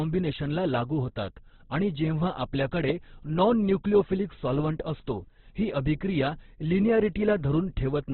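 Throughout the speech, nothing is heard above 4.4 kHz, and the voice sounds rough, grainy and noisy. This is likely heavy Opus compression near 12 kbps in its music mode. Unlike MP3, bands are noise-filled rather than emptied, so there's less swirling.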